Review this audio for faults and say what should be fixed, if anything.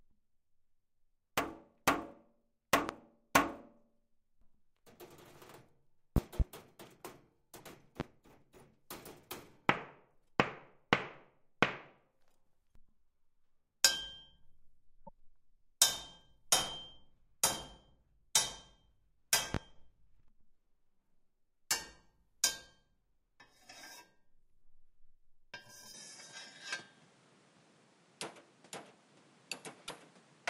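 Sharp pops jump out at 2.89 s, 8.0 s and 19.54 s, and a double pop at 6.16 to 6.43 s, peaking roughly 20 to 25 dB above the sound; these are loud pops, likely voltage spikes from a plug, switch or static. Check connectors and cabling, and ground the setup to stop the spikes.

Brief chirps or holes appear at 7.57 s, 15.06 s and 29.87 s, with the sound skipping ahead, which fits 24 ms frames, likely from a broken MP3 bit reservoir after frames were dropped. Transfer and store the file losslessly, or re-export it from an intact source.

From 25.95 s to the end the sound turns duller, with nothing above 11.4 kHz and a new noise floor about 30 dB down, no gap or level jump, likely the input switched to a poorer device. Lock the recording input so the system cannot change devices mid-take.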